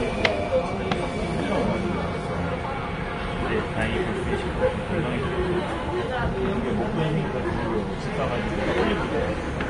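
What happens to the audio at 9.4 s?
At 9.4 s the sound carries the same damage it has from start to finish, most likely Vorbis compression. Nothing is present above 10.6 kHz, and the treble just below that cut-off turns into hiss and grain. Attacks are smeared and tones have a rough edge, which fits a low bitrate of around 31 kbps. A simple low-pass filter would only dull the top without adding that noisy grain. MP3 damage leans more toward metallic swirling than toward this broadband hiss.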